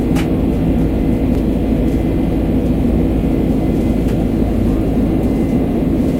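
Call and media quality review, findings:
Skips at 1.35 s and 3.75 s, each dropping about a tenth of a second, spliced with no gap. Likely audio missing between chunks: capture or processing stage losing samples at 2.5 s chunk handover. Waveform: abrupt discontinuity, mismatched amplitude across the join. Spectrogram: thin vertical broadband line at each splice, with sound events shortened or cut mid-envelope.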